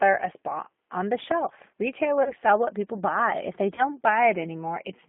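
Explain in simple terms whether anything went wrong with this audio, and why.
The whole recording goes through the G.729 codec, a low-rate phone codec that rebuilds speech from a simplified model of the voice. Nothing below about 200 Hz or above 3.5 kHz gets through, so the sound is muffled and slightly rough and synthetic. Unlike plain muffling, that roughness comes from the model itself.

VoIP packet loss concealed by the speech codec occurs twice. The first is from 2.23 to 2.32 s, between "spot on the shelf" and "sell what people". The second is from 3.75 to 3.85 s. Each time, about 30 ms of audio went missing, which fits one lost packet. The decoder stretched the last sound into a brief, fading smear that stays weak for roughly 0.1 s. A dropout would be silent instead.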